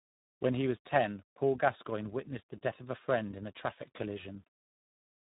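Speech with tandem speech coding throughout: it sounds rough, muffled and warbly, as each coding stage re-encodes the previous stage's degraded output. The sound points to two speech codecs in a row, ending in iLBC. Nothing is present above 3.8 kHz.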